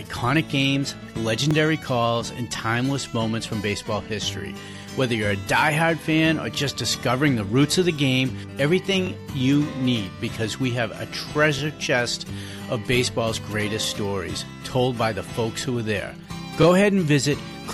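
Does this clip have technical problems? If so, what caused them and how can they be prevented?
Yes, there's an overlapping-chunks problem: you get a quick stutter at 1.51, 6.55, 9.07, 11.59 and 16.63 s, each lasting 20 ms. The audio went through in 2.5 s chunks, and each new chunk started 20 ms before the previous one ended, so that sliver plays twice at those joins and sounds like a tick. To prevent it, make sure each chunk picks up exactly where the last one stopped, or crossfade and trim the overlap.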